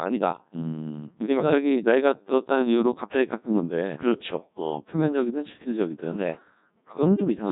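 Throughout the speech, a Codec 2 vocoder at about 1.2 kbit/s rebuilds the voice from sine waves, leaving it robotic, buzzy, heavily degraded, with nothing above 3.9 kHz.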